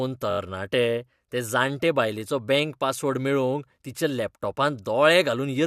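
A rapid stutter between 0.30 and 0.38 s: a short slice of the speech plays four extra times. These are repeated frames, a single compressed block of about 21.3 ms replayed, adding 85.3 ms to the audio.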